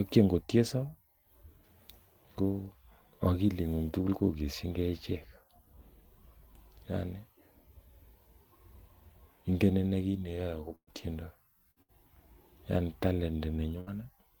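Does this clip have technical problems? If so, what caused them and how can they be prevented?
Yes. Bursts of packet loss at 10.75, 11.71, 11.82 and 13.80 s drop 120 ms, then 60 ms each. The receiver stretches and fades the preceding sound across each gap, going briefly silent at 10.75 s. A steadier network, larger jitter buffer and forward error correction prevent this.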